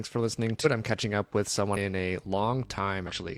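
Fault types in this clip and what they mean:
Damaged data in a compressed stream: Three short glitches where the encoded data itself is corrupted, so the decoder misreads those frames, loses its place and has to hunt for the next valid frame header. Each is a quick glitch, about 50 ms long: one at 0.61 s right after "for listening", another at 1.72 s, and a last one at 3.07 s. That last one lands inside the hum.
Mains hum: A steady low 50 Hz tone comes in at about 2.25 s and runs to the end of the speech. It's the kind of thing a ground loop or a nearby transformer does, leaking the power line frequency into the signal path. It sits roughly 25 dB below the speech, so it's a low drone underneath rather than something that swamps the talking.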